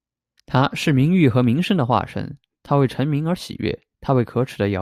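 A speech recording with no audible technical faults.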